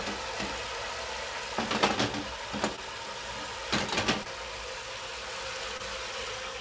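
At 2.76 to 2.79 s, 4.23 to 4.27 s and 5.77 to 5.81 s, short concealed packet loss occurs. Each time about 20 ms of audio failed to arrive in time. The receiver extended the preceding sound to cover the gap, then faded back into the real signal. Each one is a brief smear or wobble. Nothing above 8 kHz is present, which fits a G.722 call path.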